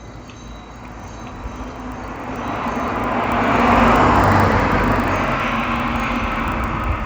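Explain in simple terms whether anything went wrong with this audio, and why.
Something did go wrong. From start to finish, the sound carries a steady buzz made of tiny ticks, 25 per second, heard only while sound is present. This is a resampler restarted on every block. The audio was converted in separate 40 ms pieces, likely from 16 kHz up to 48 kHz. Each piece was handled without knowing what came before or after it, so every join carries a small error, and those errors repeat as a buzz.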